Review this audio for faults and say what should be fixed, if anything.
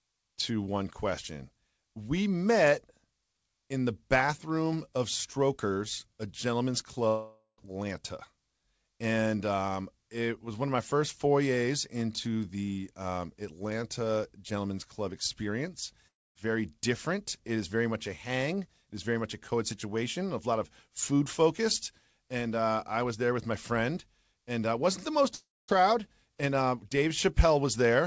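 Long network dropout at 7.08–7.60 s after "a gentleman's", 16.08–16.37 s before "very different", and 25.35–25.70 s after "uh wasn't the most". In each, the last sound trails off as a fading buzz into near-silence, and the speech resumes with about a third to half a second missing, likely from lost packets. Prevent this by stabilising the network link or adding forward error correction and redundancy to the call stream.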